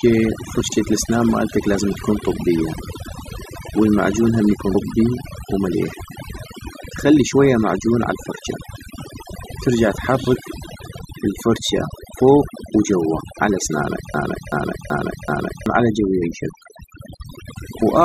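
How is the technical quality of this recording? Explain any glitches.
The recording has clear technical problems: heavy processing throughout and several short glitches.

Overdone noise removal runs through the entire speech clip. The noise reduction was set too strong. It pulls individual frequency bands far down whenever they sit near its noise estimate. Quiet parts of the voice get cut along with the noise. The background drops and breaks up into small twinkling specks.

Damaged data in a compressed stream causes three brief blips, at 4.74 s, 7.32 s and 16.21 s. The first comes right after "والمعجون هم يكون". The second comes just before "معجون عالفرجة". At each point, part of the compressed data was corrupted. The decoder misread those frames, lost sync, and jumped to the next valid frame header. Each one is heard as a short chirp, squawk, click or hole.

A broken-record loop starts at 14.14 s, just after "الفرجة فوق وجوا على", and lasts until 15.66 s. 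A fragment about 380 ms long repeats four times, back to back. The likely cause is a stall in the player, encoder or stream, which kept sending the last piece it held. The audio that should have played during those 1.5 seconds is gone.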